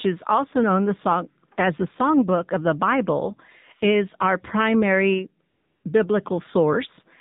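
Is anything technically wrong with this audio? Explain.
Yes. Throughout the speech, the AMR narrowband mobile codec has audibly damaged the sound. Nothing above 4 kHz survives, and the voice has a buzzy, synthetic edge because a vocal-tract model is driven by sparse pulses. The level of damage fits a low mode around 7.4 kbps.

From 5.50 to 5.84 s, just after "is our primary", there is AMR comfort noise. Speech frames stopped for about 340 ms, and the receiver filled the gap with smooth synthetic noise built from a coarse level-and-spectrum description. The real background switches out and back in.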